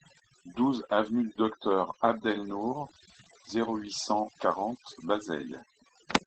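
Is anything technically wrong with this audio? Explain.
Yes. Overdone noise removal runs throughout: a noise reduction stage set too aggressively pushes frequency bands near its noise estimate down to almost nothing. Quiet parts of the speech vanish along with the noise, leaving near-silent gaps with twinkling specks.

Opus voice compression is also present the whole way through, in SILK mode at about 12 kbps with wideband bandwidth, so nothing remains above about 8.7 kHz. The coarse coding at this rate is plainly audible, making the speech muffled, slightly hoarse and faintly robotic.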